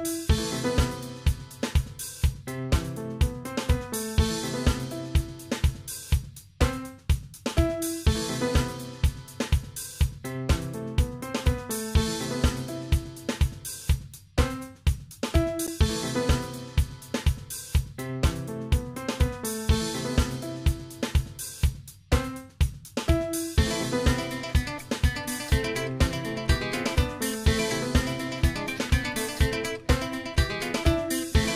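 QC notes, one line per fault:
15.67 s, Bluetooth stall: the sound drops to silence for about 12 ms and then carries on, a brief hole in the sound. This is likely a Bluetooth stall, where radio interference delayed packets on the wireless link long enough for the headphones' small playback buffer to empty, so output stopped until retransmitted data arrived to refill it and playback could resume.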